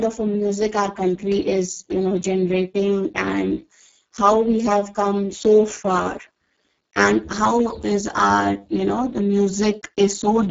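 From the first second to the last, the speech carries heavy Speex codec damage. The hoarse, buzzy, almost robotic texture points to a very low setting, around 6 kbps. At that rate the CELP coder has too few bits to model the excitation properly, so voicing turns rough and noisy. Nothing comes through above about 7.6 kHz, and the upper band sounds like smeared hiss rather than real detail.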